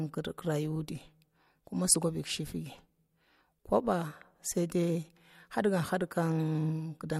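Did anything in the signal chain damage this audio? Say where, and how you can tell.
No, nothing in the signal chain damaged this speech.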